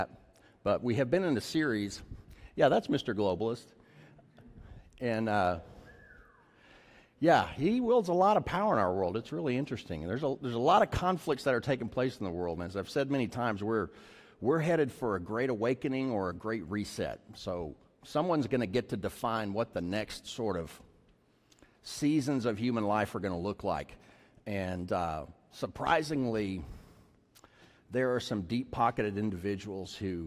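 No technical faults can be heard anywhere in the recording.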